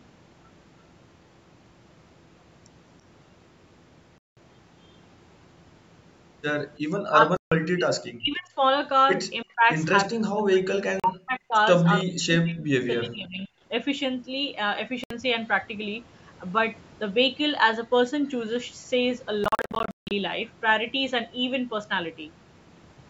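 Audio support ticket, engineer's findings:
Bluetooth dropout: hard silent gaps at 4.18–4.37 s, 7.37–7.52 s, 11.00–11.04 s and 15.04–15.11 s. A scattered burst at 19.44–20.11 s loses about 0.44 s in pieces, the longest 0.16 s. Likely packets missing the headphone link. Sound resumes as if it had played on. Full mute, not attenuation.

Speech suppressed in double talk: speech drops about 25 dB at 7.12–7.92 s and 9.43–9.66 s, and about 40 dB at 8.16–8.62 s, 10.08–11.55 s and 12.04–13.51 s. Likely the echo canceller ducking the talker under far-end activity. Level loss lasting up to 1.5 s, unlike a dropout's clean holes.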